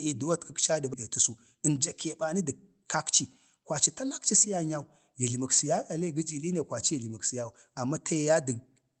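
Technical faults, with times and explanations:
0.93–0.95 s, skip ahead: the speech lurches forward as roughly 0.7 s of audio is dropped, and the two sides are butted together with no fill, so part of a phrase simply vanishes and playback catches up by that much. On a waveform the envelope changes abruptly at the join, with no silent gap. On a spectrogram, harmonic tracks and formants break off and restart at unrelated positions, a clean vertical seam across the band that stops near 8 kHz, as the Opus call path limits it.
1.29–1.77 s, jitter buffer speed-up: the receiver was holding more audio than it wanted and trimmed it back by cutting out short pitch-period pieces one after another, about 40 ms in all. The speech runs at 107% of normal speed while the pitch stays put, so it sounds slightly rushed. On a spectrogram, syllables and formant transitions are compressed in time while harmonic spacing is unchanged. 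On a waveform, the cycles look continuous but the stretch is shorter.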